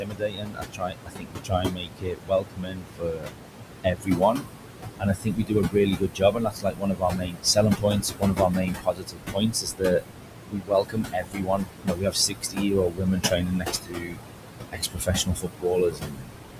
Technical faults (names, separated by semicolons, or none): noise suppressor artifacts; speech cut by the noise suppressor